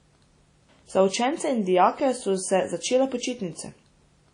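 Throughout the speech, this is most likely low-bitrate audio saved at a high bitrate: an earlier low-rate encode, which fits something like 32 kbit/s WMA, was re-encoded as a much larger MP3, perhaps around 192 kbit/s. The second encode cannot restore what the first discarded, so the band stays cut off with nothing above about 10.1 kHz. The speech sounds dull and closed-in at the top, and the first codec's artefacts carry through unchanged.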